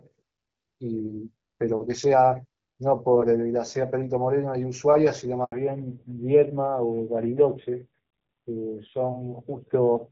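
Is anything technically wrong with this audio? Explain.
Yes, there are two faults, both at the same point in the call.

Handover gap, 5.44 to 5.52 s: the call switched from one network to another, and no speech frames reached the receiver during the switch. The voice fades out within a few tens of milliseconds and the line stays silent for about 80 ms until the new link picks up. Whatever was said in that interval is gone rather than garbled.

Fallback to narrowband, from 5.52 s to the end: after the handover the call no longer runs on HD Voice but on an older narrowband codec. Before the switch the speech has the fuller wideband sound of AMR-WB, consistent with a rate around 12.65 kbit/s with light coding damage. Afterwards nothing above 4 kHz remains, so sibilants and breathiness lose their edge. The voice turns duller and rougher, which fits AMR-NB at a low rate such as 7.4 kbit/s.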